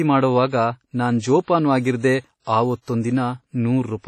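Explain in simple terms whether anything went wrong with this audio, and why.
Throughout the whole clip, the speech sounds washy and ringing, with a hiss that swells and fades along with the voice, and nothing above about 12.7 kHz. That's heavy damage, likely from WMA compression squeezing the file too hard and smearing fine detail.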